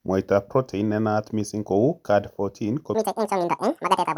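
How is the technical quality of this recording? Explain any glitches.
The recording has one fault: from 2.94 s to the end at 4.18 s, a section at the wrong speed. The speech runs 1.88 times too fast and jumps about ten semitones higher, sounding hurried and squeaky. Likely that section was played back against the wrong clock.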